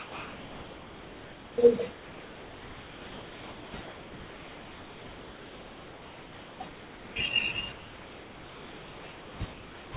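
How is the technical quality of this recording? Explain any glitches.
The speech repeatedly gives way to steady, even noise, in six stretches: 0.00–1.58 s, 1.92–3.74 s, 3.82–6.60 s, 6.68–7.16 s, 7.72–9.40 s and 9.52–9.94 s. The longest lasts nearly 2.8 s. Nothing reaches above 4 kHz, as a narrowband call codec would produce, and the room noise sits about 26 dB below the speech.

These gaps are likely sound dropped by the voice detector. The sender mistook the speech for background and stopped transmitting, and the receiver filled each gap with comfort noise. Packet-loss concealment leaves smeared or repeated fragments. Here the fill is smooth hiss, and it holds until the speech returns.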